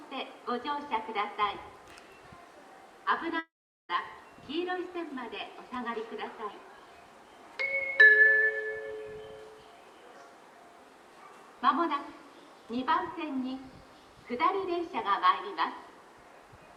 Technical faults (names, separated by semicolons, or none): long network dropout